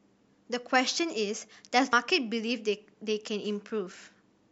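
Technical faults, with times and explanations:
1.93 s, compressed frames skipped: the speech jumps ahead by roughly a fifth of a second, which fits about two whole 92.9 ms frames missing or rejected as damaged.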